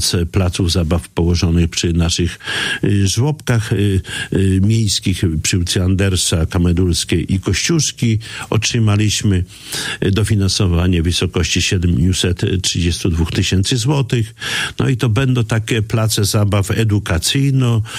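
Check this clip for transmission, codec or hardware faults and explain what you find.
One fault is present: video or display buzz from 3.88 s to 11.70 s. A screen or video cable is coupling its scanning signals into the audio path, leaving a raspy buzz at the 59.94 Hz field rate with hash spread above it and a thin whine at the 15.7 kHz line rate, sitting roughly 30 dB under the signal. Mains hum would be a smoother tone at exactly 50 or 60 Hz. This buzz is harsher, and the high line-rate whine marks a video source.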